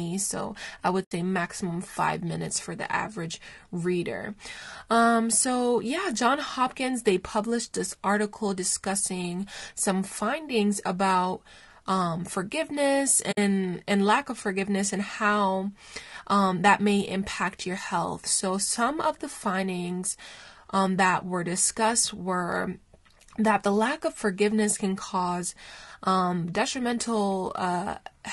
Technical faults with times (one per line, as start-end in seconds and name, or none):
0.00-28.33 low-delay AAC compression
1.03-1.12 AAC frame loss with muting
13.31-13.38 AAC frame loss with muting